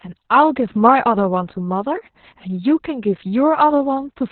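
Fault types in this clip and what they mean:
Opus voice compression: muffled, hoarse, slightly robotic speech from coarse narrowband SILK coding, likely near 6 kbps; the spectrogram shows nothing above 4.3 kHz.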